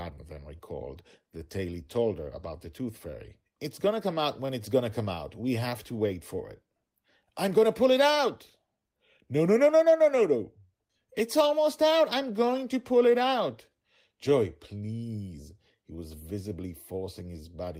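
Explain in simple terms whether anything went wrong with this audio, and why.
Yes, something went wrong. There is clock drift between sender and receiver: the sender's clock runs about four percent slow, so audio arrives too slowly. The result is repeated timing corrections from 0.14 to 17.42 seconds. The receiver keeps repeating tiny pieces to fill gaps, adding about 0.7 seconds overall. The speech sounds slightly slow, with small hiccups.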